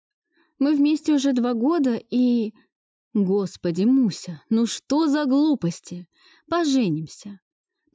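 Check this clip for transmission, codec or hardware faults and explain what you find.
Nothing faulty can be heard anywhere in this audio.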